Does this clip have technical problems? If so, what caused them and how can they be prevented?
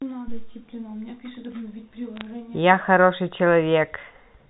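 Yes. From 2.16 to 2.25 s, bit errors on the digital phone line flipped a few bits, each corrupting one sample, causing brief crackling ticks over the speech. Error-correcting transmission or a cleaner, better-shielded digital link would prevent them.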